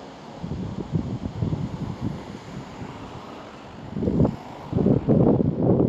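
From 3.41 s to the end, a time-stretched section plays the sound about 1.76 times faster with pitch unchanged, so it turns rushed. It was likely squeezed by dropping short pieces; a spectrogram shows compressed events, unshifted harmonics and small seams at the splices.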